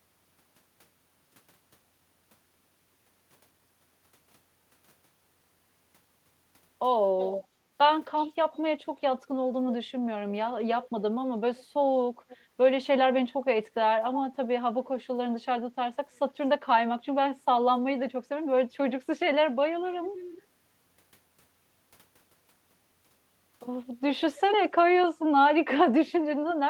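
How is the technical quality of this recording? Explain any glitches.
The speech has repeated echo leak at 7.17–7.46, 8.19–8.33, 10.83–10.89, 11.57–11.65, 12.29–12.37, 20.16–20.38, 24.36–24.40 and 26.49–26.54 s. A copy of the speech returns 0.29 to 0.31 s late, roughly 10 to 30 dB quieter. The likely cause is a loudspeaker on one side of the call whose echo canceller missed part of the pickup. On a spectrogram, these appear as weaker, time-shifted repeats of the speech harmonics.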